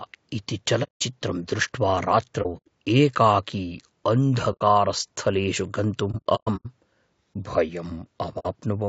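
Throughout, the speech sounds rough and grainy, with a hiss between the harmonics and a thin, artificial top end. This is plainly audible low-delay AAC compression, likely AAC-ELD at around 32 kbps, whose short frames resolve pitch poorly at that rate.

The sound fades to silence and back with soft edges at 0.83 s for 0.18 s, 2.42–2.68 s as broken gaps (longest about 0.1 s), 4.52 s for 0.09 s, 6.11–6.66 s as scattered dropouts, and 8.39 s for 0.06 s. This is AAC frame loss with muting: the decoder zeroed the missing frames and the overlapping windows smoothed each hole.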